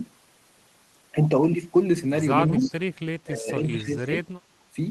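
From 2.56 to 2.66 s the speech dips by about 10 dB for a tenth of a second. This is speech suppressed in double talk. Both ends were likely talking at once, so the echo canceller turned down this talker along with the echo. An echo leak overlaps it, from 2.58 to 2.73 s. A faint copy of the voice returns 274 ms late, about 15 dB below the speech. One end's canceller likely let some loudspeaker pickup through. It sounds like a brief ghost. The same suppression returns between 3.26 and 4.27 s, cutting the speech by up to about 15 dB in pieces. Together those pieces last about 0.7 s. A final 40 ms dip of about 15 dB comes at 4.6 s.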